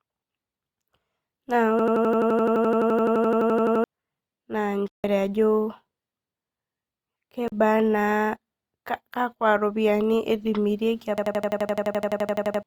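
From 1.79 to 3.84 s the speech locks into a system hang loop. The same 85 ms slice repeats 24 times at about 11.7 Hz, a machine-gun stutter that fits a 4096-sample ring buffer cycling while the driver froze, with roughly two seconds of audio lost. At 4.88 s a 160 ms block of digital silence opens a hard-edged hole, likely because the output buffer went unfilled. At 7.48 s a 40 ms block does the same on a shorter scale. Unlike the loop, these gaps repeat nothing, and the audio simply stops and resumes. From 11.18 to 12.63 s the hang loop returns with the same 85 ms period, repeating 17 times and costing about one and a half seconds.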